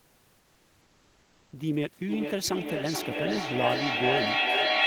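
From 0.00 to 1.51 s the sender has likely stopped transmitting during the pause, as discontinuous transmission does, and the receiver fills the gap with comfort noise in place of the background. The room noise, sitting about 36 dB under the speech elsewhere, gives way to a flat, featureless hiss about 2 dB quieter.

From 2.09 s to the end, a second device in the room replays the call into a microphone whose echo canceller cannot remove it, producing feedback echo between two devices. The speech returns about every 0.4 s, thinner and ringing, and the repeats build up rather than fade, peaking about 4 dB above the speech itself.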